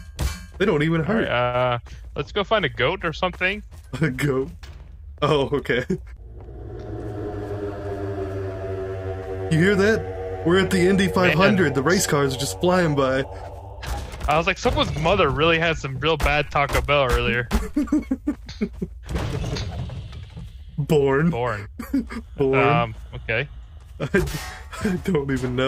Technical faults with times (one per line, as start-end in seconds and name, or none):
0.00-25.67 clock drift between sender and receiver
0.86-25.67 repeated timing corrections